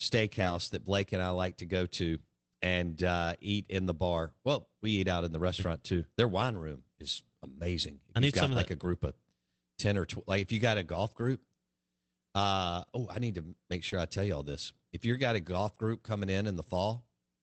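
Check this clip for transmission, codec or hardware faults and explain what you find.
Two kinds of network fault affect the speech, both around packet loss on an Opus call path limited to about 8 kHz.

Lost packet rebuilt from error correction occurs at 0.41–0.55 s, 8.49–8.59 s, 11.21–11.23 s and 13.91–13.93 s. Packets went missing, but each following packet carried a cheap, low-bitrate duplicate that the decoder played in their place. The first two events cover 80 ms and 60 ms, which fits four and three 20 ms packets. There is no gap, but those stretches turn coarser and noisier, a brief drop in clarity.

Short concealed packet loss hits at 13.89–13.93 s. About 20 ms of audio arrived too late to decode, so the receiver invented a replacement by extending the preceding sound and then crossfading into real audio. The tail of that window overlaps the error-correction rebuild at 13.91 s. The result is a fleeting smear or wobble in the speech.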